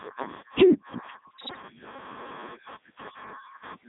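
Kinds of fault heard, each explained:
Gain pumping: The gain swings around 5 dB with each loud syllable. Loud and quiet parts sit close in level, so the speech sounds squashed. The likely cause is too much input gain feeding a fast limiter.
Codec 2 vocoder: The speech is rebuilt from pitch, voicing, energy and a spectral outline, not sent as a waveform. It sounds robotic and buzzy throughout, with heavy damage. The narrow band of 150 Hz to 3.7 kHz fits Codec 2 at 3.2 kbit/s.
Bit errors on digital voice radio: From 1.31 to 1.62 s, the synthetic voice jumps in pitch, level and tone colour. It breaks into warbles and bleeps. This points to a few percent of bits flipping in a very low-rate stream, spoiling whole frames.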